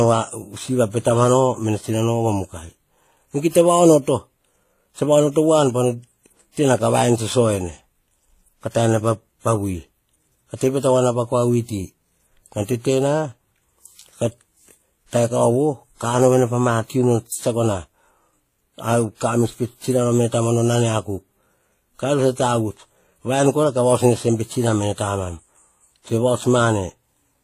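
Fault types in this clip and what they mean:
Transcoding between lossy codecs: Speech carries the different artefacts of stacked compression heard together, likely HE-AAC around 20 kbit/s then WMA at 48 kbit/s. Nothing remains above 14.8 kHz.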